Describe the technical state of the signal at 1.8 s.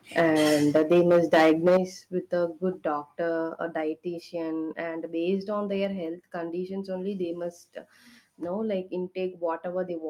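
Microphone volume stepped down at 1.77 s, just before "with a good doctor": the level of both the speech and the background falls abruptly by about 8 dB. The likely cause is the call software detecting an over-hot input and cutting the device's microphone gain in a single step.

Microphone overload runs from 0.17 to 1.77 s, ending just ahead of that drop. The peaks push about 9 dB past the converter's ceiling and have their tops sheared off, with roughly 7 percent of samples flattened. That gives the louder syllables a harsh, crackling edge, most likely from an input volume set too high.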